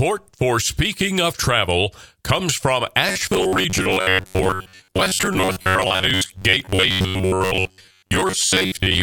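From 3.09 s, right after "comes from", the speech collapses into a rigid, metallic buzz near 93.8 Hz that lasts to the end of the clip. The syllables are still roughly traceable. This is robotic sound from repeated short buffers, likely from new audio arriving too seldom, so a fragment of about 10.7 ms is looped to fill most of the time while the real signal is skipped.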